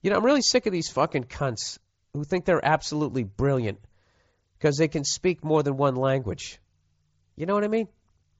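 No technical faults are audible anywhere in this speech.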